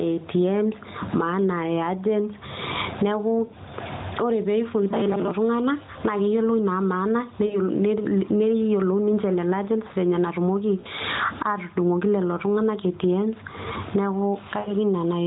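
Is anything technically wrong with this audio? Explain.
Yes. Gain pumping runs throughout: the gain swings by around 20 dB under loud speech. It is likely excessive gain driving a fast limiter, unlike steady compression, which doesn't breathe.

Lost AMR speech frames occur at 3.46–3.52 s, 7.46–7.57 s, 10.80–10.86 s and 14.60–14.72 s. The decoder briefly repeats the last good speech parameters at falling gain, giving a drawn-out sound that fades toward silence rather than a clean dropout gap. The longest is at 14.6 s. The narrowband band-limit below 4 kHz is consistent with the AMR-NB codec, and its light coding damage fits the 12.2 kbps mode.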